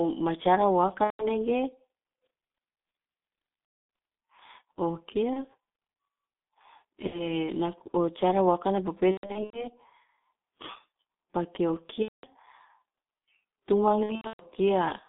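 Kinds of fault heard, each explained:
G.723.1 codec: The speech went through a G.723.1 codec at 6.3 kbit/s, coded in 30 ms frames within a line band of about 200 Hz to 3.7 kHz. The heavy coding damage leaves it muffled and hoarse, with blurred consonants.
VoIP packet loss concealed by the speech codec: Packets were lost seven times between 1.04 and 14.45 s, with gaps of 30 to 270 ms. The decoder bridged each gap from its last pitch and filter at falling gain, giving buzzy or noisy fading stretches and weak speech afterwards.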